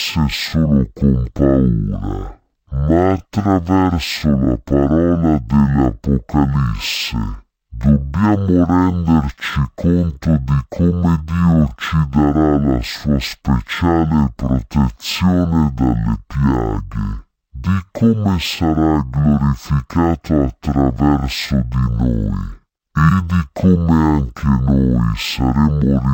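Stereo read as mono, throughout: interleaved left and right samples are played back as one channel, so the speech runs at half speed and an octave low.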